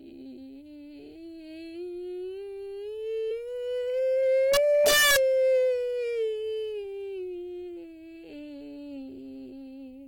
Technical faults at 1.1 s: none

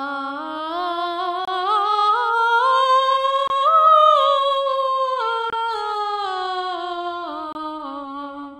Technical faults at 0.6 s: doubled audio track

